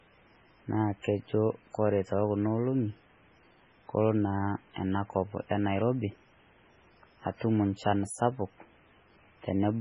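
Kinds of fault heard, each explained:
MP3 compression: The speech was likely run through an MP3 encoder starved of bits, and the damage fits a very low bitrate of around 16 kbps. With so little to spend, the encoder discards everything above a fixed cutoff and zeroes weaker frequency lines, so they flicker in and out from frame to frame. Across the whole clip this leaves the speech heavily degraded and dull at the top, with a watery, swirling texture, metallic chirps on s sounds and smeared onsets.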